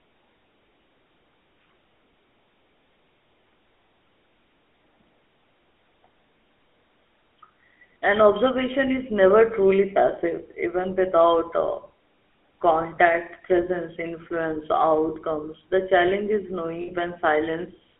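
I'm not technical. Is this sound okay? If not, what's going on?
No. The whole clip carries the sound of the GSM full-rate codec, the original digital mobile phone system. It rebuilds speech from a rough model of the voice, which gives it a buzzy, gravelly texture, and the phone line cuts everything above about 3.4 kHz, so it sounds thin.

There are also two moments of lost GSM frames, at 12.96 to 12.99 s and 16.82 to 16.90 s. The phone filled each gap by repeating the last good piece of sound, which comes out as a short metallic ring lasting about 20 ms, then 60 ms.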